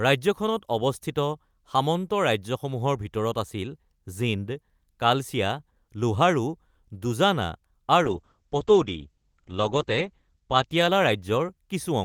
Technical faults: call bitrate drop

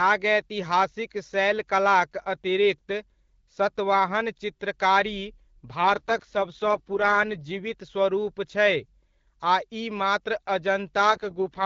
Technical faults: AMR rate drop

